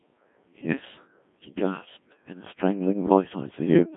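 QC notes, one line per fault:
Throughout, Codec 2 vocoder: speech rebuilt from pitch and envelope as sine waves, heavily buzzy and robotic within 150 Hz–3.5 kHz, which fits a 1.6 kbit/s mode.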